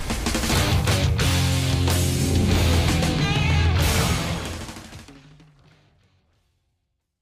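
Nothing here sounds broken, and the gentle fade that begins around 4 seconds in and carries on to the end is just a smooth, deliberate-sounding taper with no click or hard edge.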